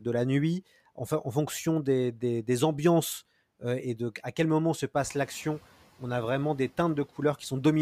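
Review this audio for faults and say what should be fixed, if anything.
Around 5 s the room noise in this speech jumps by about 14 dB, and the noise suppressor is caught catching up. From 4.98 to 5.29 s the louder noise passes with too little reduction, then drops by about 5 dB as the estimate adapts over roughly 310 ms. Unlike pumping, which swells and recedes repeatedly with the speech, this is a single step that settles once. A faster noise-estimate update for sudden level rises would shorten it.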